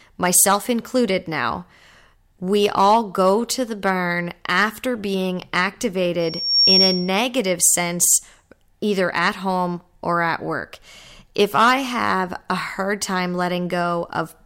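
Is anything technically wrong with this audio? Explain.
Yes, the speech has two faults. From 0.36 to 0.44 s, just before "included now", there is hard clipping. The peaks exceed what a stage in the chain can pass by about 1 dB and are sliced flat, adding high harmonics heard as a brief crackle on the loudest moment.

From 6.20 to 7.19 s there is loudspeaker feedback squeal. The microphone is picking up its own loudspeaker, and at 5.5 kHz the loop gain exceeds unity. A piercing single tone swells over a few tenths of a second until it sits a few dB above the speech.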